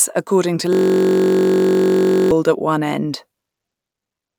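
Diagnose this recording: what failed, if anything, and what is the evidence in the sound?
Driver or buffer: system hang loop, 0.73 to 2.31 s. A 21.33 ms slice repeats as a steady 46.9 Hz buzz. The driver froze while the hardware replayed its ring buffer, which fits 1024 samples.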